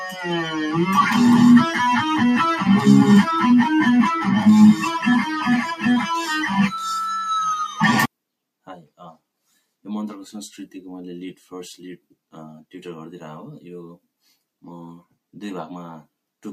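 A noise suppressor built for speech stays active across the whole clip, so there is a noise suppressor applied to music or sounds. Because it treats steady, sustained material as noise, it keeps pulling the level down and letting it back up. The result is a restless pumping, with the gain swinging by around 5 dB. Onsets punch through while anything held thins and sinks beneath them.

At three points the sound is cut by the noise suppressor more heavily. From 0.00 to 0.25 s, the opening is attenuated by up to about 9 dB, dulling roughly the first third of a second. Between 4.74 and 6.57 s the suppressor clamps down hardest, by up to about 13 dB. Around a second of that stretch sags and its decays are chopped short. From 8.67 to 9.18 s a further dip of up to about 12 dB swallows close to a third of a second of sustained sound.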